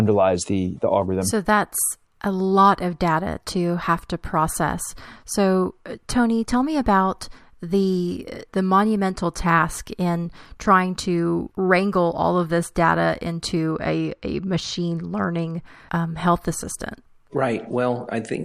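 From 13.72 to 15.66 s the speech turns dull, with the top of the spectrum dulled. This is channel delay (comb filtering): one channel runs late by only a couple of samples, well under a tenth of a millisecond, and when the two are summed to mono the shared sound cancels at regularly spaced frequencies. With so short an offset, the first deep notch lands up around 10 kHz.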